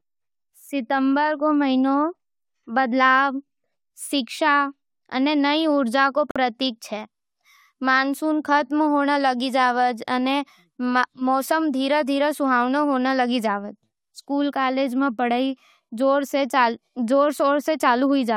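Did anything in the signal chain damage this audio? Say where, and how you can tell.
Yes: a gap at a join of encoded pieces, a 47 ms silence at 6.31 s with smeared edges, where separately encoded segments kept their encoder delay and padding.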